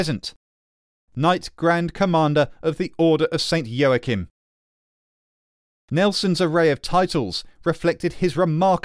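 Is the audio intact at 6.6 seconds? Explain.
Yes, the audio is intact at 6.6 seconds, with no audible fault at that moment.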